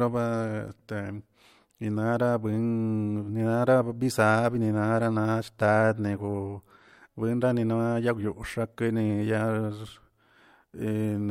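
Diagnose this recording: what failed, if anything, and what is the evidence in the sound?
CD scratch ticks at the playback stage: three sub-millisecond ticks between 0.48 and 0.88 s, paced by disc rotation rather than scattered like random clicks, where uncorrectable data was interpolated or muted.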